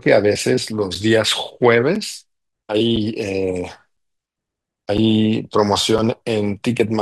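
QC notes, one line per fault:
0.95, 1.95, 2.96, 3.97, 4.97 and 5.98 s: gap between chunks. The speech is split into 1.0 s chunks with about 6.5 ms of silence inserted at each join, so no speech is lost, but it is punctured by short holes at a steady one-second rhythm.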